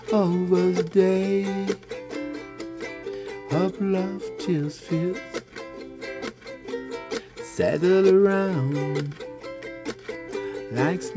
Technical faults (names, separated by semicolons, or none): none